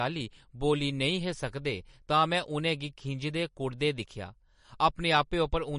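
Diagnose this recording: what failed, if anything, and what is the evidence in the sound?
The codec stage has failed: the speech carries plainly audible MP3 compression damage from start to finish. Nothing survives above 10.6 kHz, and weak spectral detail flickers in and out between frames, giving the sibilants a watery, swirling quality and smeared onsets. That fluttering texture, rather than a clean, static loss of treble, separates it from a simple low-pass filter. The combination of a hard cutoff and plainly audible artefacts fits a low bitrate around 40 kbps, likely the cause.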